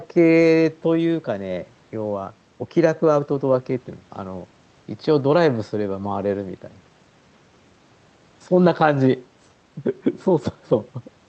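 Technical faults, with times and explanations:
Nothing here to flag; this speech simply came through an ordinary call connection, with the highs topping out around 8 kHz as you'd expect from that kind of link.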